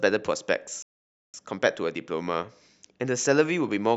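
At 0.82 s the speech cuts out and stays silent until 1.34 s, a gap of about 0.51 s. This is a playback stall. The player likely ran short of data or was blocked. The output then resumes after the pause.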